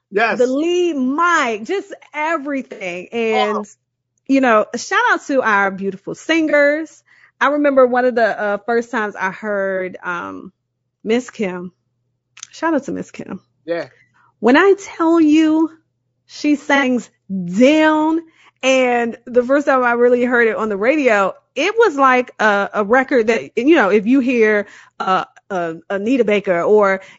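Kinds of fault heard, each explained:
Low-delay AAC compression: The speech sounds rough and grainy all the way through, with noise between the harmonics and a thin, somewhat synthetic top end. That points to AAC-ELD, the short-frame video-call codec, likely squeezed to something like 32 kbps.
AAC frame loss with concealment: These are short gaps where the decoder covered missing audio by reusing the last good spectrum, heard as brief smeared, phasey blips. They fall at 2.72 s (about 90 ms), at 6.50, 9.77 and 23.33 s (30 ms each), and at 16.76 and 25.01 s (60 ms each).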